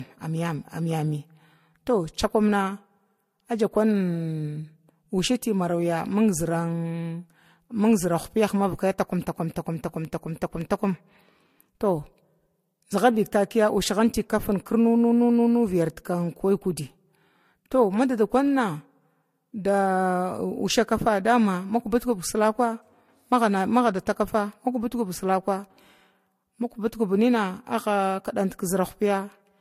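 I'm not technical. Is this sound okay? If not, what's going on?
No. The speech was likely squeezed by one lossy codec and then re-encoded by another, which is called transcoding between lossy codecs. Both sets of compression damage pile up for the whole clip, and nothing above 16.4 kHz survives, so the top sparkle is missing.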